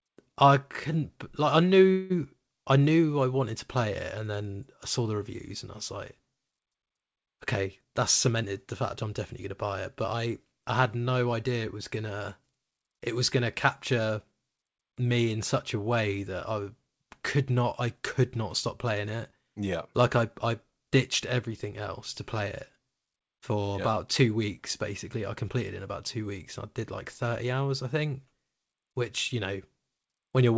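At 1.92 s, just after "I couldn't like I", there is a call audio freeze lasting to 2.12 s. The last sound is stretched into a short fading buzz or hiss for about 180 ms. Nothing is lost. When "I knew I wanted" arrives, the speech resumes where it stopped, but it now runs about 0.18 s later. The likely cause is delayed packets that let the jitter buffer run dry.

From 7.84 to 9.11 s comes a jitter buffer speed-up. The receiver trims tiny pitch-period slices, one after another, to shed excess buffered audio. Speech plays about 7% fast at unchanged pitch, dropping roughly a tenth of a second. It sounds briefly hurried. A second pass runs from 9.51 to 10.53 s, ending before "I had no idea". This one is about 6% fast and removes roughly 70 ms.

Throughout, nothing is heard above 8 kHz, which fits a G.722 call codec at 64 kbps.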